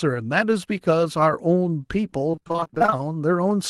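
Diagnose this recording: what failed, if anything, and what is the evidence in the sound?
The network stage failed: repeated packet loss (robotic sound) from about 2.31 to 2.97 s. That stretch turns choppy because it's hit by a quick run of short dropouts, none longer than about 24 ms. The receiver patches each hole by stretching the last bit of sound, and roughly half of that span ends up being filler. That's why it sounds robotic. The Opus call path itself, running with about a 12 kHz bandwidth, isn't the problem.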